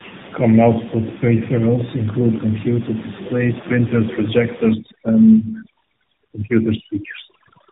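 Tandem speech coding runs through this whole speech clip: the sound is rough, muffled and warbly, with nothing above 3.8 kHz, which points to two AMR-NB narrowband encodings joined by a G.711 link, each coder re-encoding the previous one's degraded output. Overdone noise removal starts at 4.73 s and lasts to the end. The room noise, about 15 dB below the speech, drops and breaks up into twinkling specks as bands near the noise estimate are cut.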